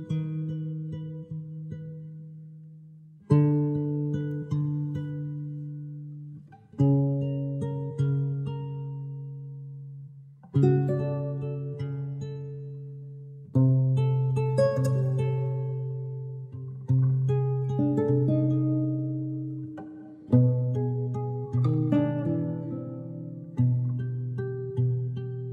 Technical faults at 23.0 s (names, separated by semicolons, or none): none